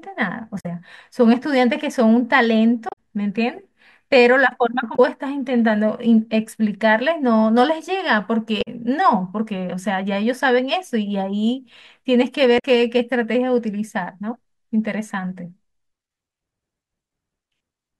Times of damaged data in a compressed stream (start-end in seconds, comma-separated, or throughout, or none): 0.56-0.66, 2.89-2.93, 4.93-5.00, 8.58-8.68, 12.55-12.65